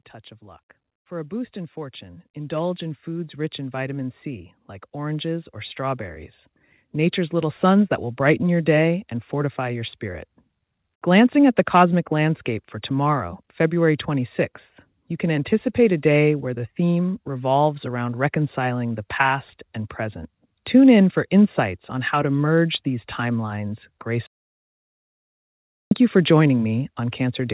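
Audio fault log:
0.39–10.31 s, automatic gain rising: level climbs about 14 dB over ten seconds, background swelling with the speech, unlike a performer moving closer.
24.27–25.91 s, audio dropout to silence: a 1.65 s gap of silence with no room tone, unlike a noise gate; the input was likely lost.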